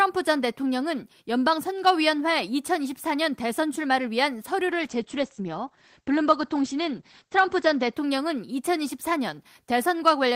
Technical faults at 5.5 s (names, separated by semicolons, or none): call bitrate drop